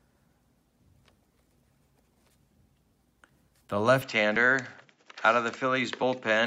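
At 4.0 s the sound turns duller and stays that way to the end. Nothing above 7.6 kHz comes through after that point. A very faint new noise floor appears, far below the signal. There is no gap at the change and no clear jump in level. This is likely an input switched to a poorer device. The system moved its input to another microphone or a headset profile with a narrower band and its own tone.

At 4.35 s a short piece of audio vanishes. The same thing happens again at 6.02 s. These are compressed frames skipped. Each time, one frame of about 21.3 ms is not played, so the audio jumps ahead by roughly 20 ms.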